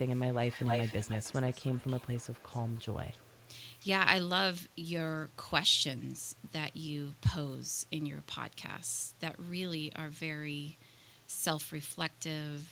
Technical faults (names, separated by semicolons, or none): echo leak